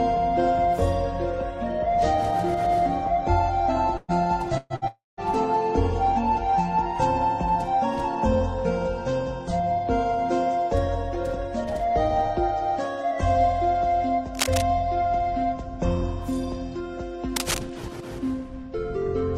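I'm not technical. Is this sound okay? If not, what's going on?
No, there are a few problems.

The first is a burst of packet loss, three times in quick succession: around 3.97 to 4.11 s, 4.57 to 4.73 s, and 4.76 to 4.85 s. Bits of audio, roughly a tenth of a second each time (the last one about half that), never made it across the connection. The player papered over each hole by stretching out the last bit of sound it had, so you hear a short buzz or hiss that fades, and then the audio jumps ahead with that slice gone.

Right after that comes a long network dropout, from about 4.88 to 5.20 s. Around a third of a second of audio is missing. It starts the same way, with the last sound smeared out and fading, but this time the gap runs longer and the final couple of tenths of a second go silent before the audio picks up again further along. The cause is likely the connection cutting out briefly rather than anything at the source.

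Later there's cable scratch noise, twice: about 14.35 to 14.62 s and 17.36 to 17.59 s. Each is a quarter-second or so of rough scratching or rustling laid over the sound, and it's fairly loud compared with the audio itself. That's likely a worn cable or plug being nudged, so the electrical contact flickers and spits out crackly noise while it moves.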